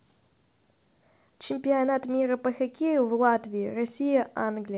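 Nothing stood out on listening to this speech, which comes through a call path whose coding leaves nothing above 4 kHz.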